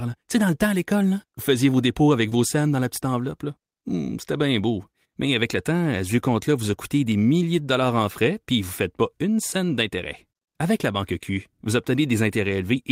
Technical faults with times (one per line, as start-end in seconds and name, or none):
2.29-2.33 short concealed packet loss
2.31-2.33 lost packet rebuilt from error correction